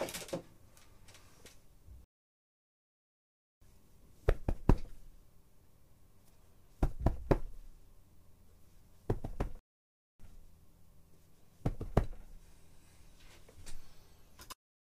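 The player most likely ran short of data or had its output thread blocked, so it delivered nothing until it caught up. That appears as two playback stalls in these sounds: from 2.04 to 3.62 s the audio cuts out abruptly for about 1.57 s, and from 9.59 to 10.20 s it drops out again for about 0.6 s. Each gap is dead silence in mid-flow before the sound resumes.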